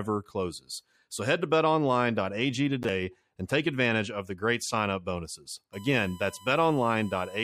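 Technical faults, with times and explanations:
5.73–7.44 s, USB whine: starting right after "great sign up bonuses", current drawn by the USB bus in 1 ms frames leaks into the audio through power or ground, adding a steady 1 kHz whine roughly 25 dB below the speech that holds fixed pitch to the end.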